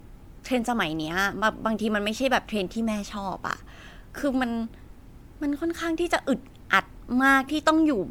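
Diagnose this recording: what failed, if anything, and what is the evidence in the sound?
Generation loss throughout the speech, at the codec stage: swirly, smeared, hollow tone with blurred attacks, likely from repeated MP3 re-encoding, about seven passes, at a 128 kbit/s rate.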